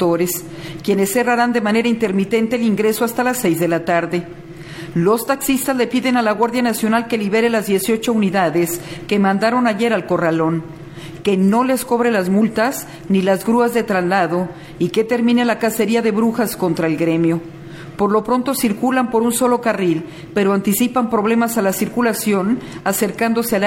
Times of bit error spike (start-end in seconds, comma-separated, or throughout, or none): 2.26